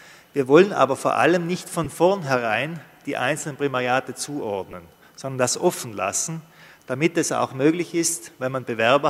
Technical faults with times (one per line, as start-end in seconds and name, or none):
1.84 lost LE Audio frames
4.71-4.73 lost LE Audio frames